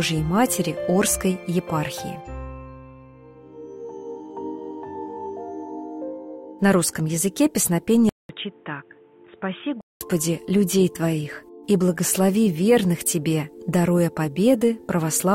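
Input switched to a poorer device, 8.09 to 10.01 s: after a 200 ms gap the audio drops roughly 10 dB, turns dull with nothing above 3.8 kHz, and gains faint new background noise, likely from a narrower-band microphone.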